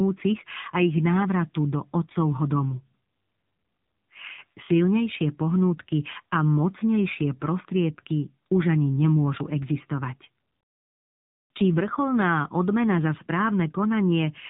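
From start to finish, the speech carries the sound of the AMR narrowband mobile codec. The audio is band-limited to 4 kHz by 8 kHz sampling, so consonants lose their crispness. Each 20 ms frame is rebuilt from a vocal-tract model excited by a few pulses. At this low bit budget, which fits AMR-NB's 7.4 kbps mode, the damage is plainly audible: a buzzy, synthetic edge that follows the voice throughout.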